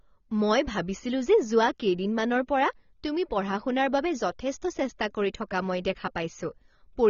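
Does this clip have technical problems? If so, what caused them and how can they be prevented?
Yes. Throughout the speech, nothing sounds above 6.9 kHz, and what remains is dull and smeared, with a fizzy, warbling texture on sibilants. This is likely AAC compression, and the damage fits a low bitrate of about 24 kbps. A plain low-pass filter would only remove treble, but here the audible band itself also churns and warbles. Encoding at a higher bitrate, or keeping an uncompressed master for distribution, prevents it.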